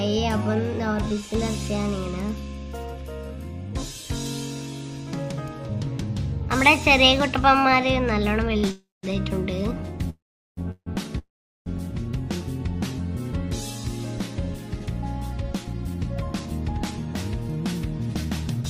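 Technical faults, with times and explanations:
8.57 to 8.65 s, short stall from a late packet: the last sound is held for about 57 ms, a brief drawn-out sound, before the audio carries on from the same point. Nothing is lost, and unlike the freezes that follow there is no fade into silence.
8.71 to 9.05 s, 10.10 to 10.59 s, 10.71 to 10.88 s and 11.18 to 11.68 s, call audio freeze: the sound stops and is replaced by a decaying buzz or hiss and then silence, lasting 321, 473, 153 and 476 ms. The silent stretches are roughly 200, 400, 80 and 400 ms. This likely comes from packets held up on the network so that the jitter buffer ran dry. Each time the audio picks up where it stopped, so gaps are inserted rather than content removed.
14.80 to 18.62 s, jitter buffer speed-up: the audio runs at about 105% speed with unchanged pitch, and sounds hurried. Many tiny pitch-period slices were cut, about a fifth of a second in all, to cut the extra delay held in the jitter buffer. 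Unlike a resampling fault, the pitch does not rise.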